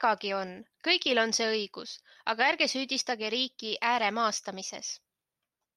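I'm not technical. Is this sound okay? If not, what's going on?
Yes, nothing wrong here.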